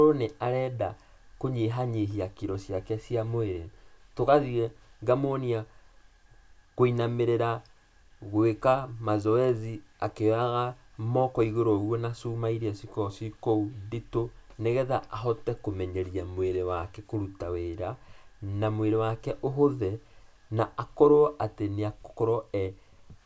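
No faults to report on this speech recording; nothing audible calls for a timestamp.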